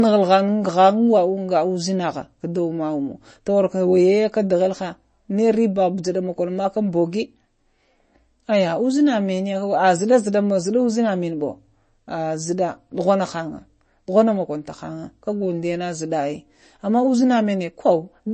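Speech that carries MP3 compression throughout, plainly audible from start to finish. Nothing remains above about 8.3 kHz, where the encoder has cut the treble at a fixed point, and the weak detail below it swirls and flickers as lines drop in and out between frames, leaving s sounds metallic and chirpy. That damage fits a low bitrate near 32 kbps, the likely cause. A plain low-pass filter would dull the top just as cleanly but leave no watery warble.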